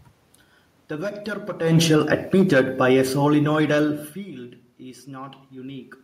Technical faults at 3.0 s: automatic gain falling

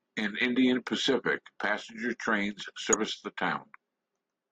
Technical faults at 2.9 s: damaged data in a compressed stream

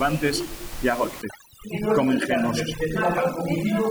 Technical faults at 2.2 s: overdone noise removal

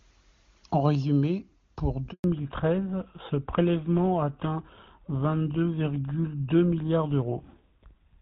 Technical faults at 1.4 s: none

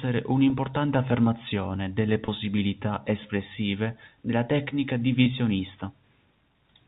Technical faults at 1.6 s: none

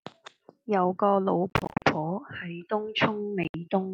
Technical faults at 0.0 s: none

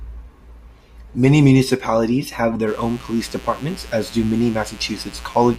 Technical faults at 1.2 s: none

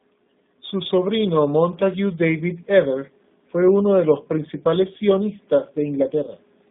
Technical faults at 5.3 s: G.729 codec

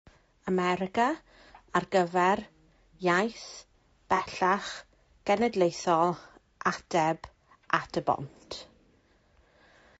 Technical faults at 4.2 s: low-delay AAC compression; AAC frame loss with concealment

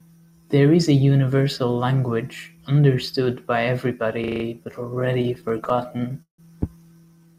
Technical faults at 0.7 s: none

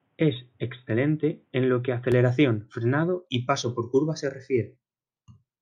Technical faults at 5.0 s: none

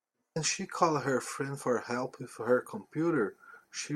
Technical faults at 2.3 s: none

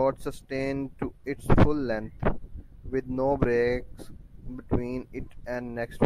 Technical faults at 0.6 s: none

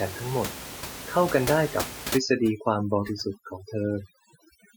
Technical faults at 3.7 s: overdone noise removal

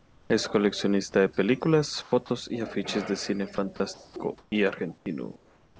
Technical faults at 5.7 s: comfort noise in place of the background; onset clipped by the voice detector

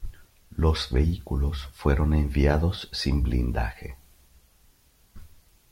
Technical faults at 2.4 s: none

